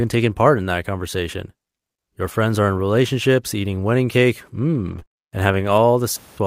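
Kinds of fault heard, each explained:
Lost packet rebuilt from error correction: At 2.29 to 2.31 s, 20 ms of audio is carried by a backup copy rather than the original data, which points to a single lost packet. The following packet held a low-bitrate duplicate of the missing one, and the decoder played that duplicate, so there is no silence. The rebuilt frame is coarser and noisier, a brief roughness in the speech.
Repeated packet loss (robotic sound): From 4.87 to 5.18 s, audio drops out five times in quick succession, about 100 ms missing in total, with the longest gap 23 ms. Each hole is patched by extending the preceding sound, around 82 ms filled, covering 27% of the stretch. About 70 ms is only roughly rebuilt. The closely spaced repeated patches make the speech choppy and give it a robotic edge.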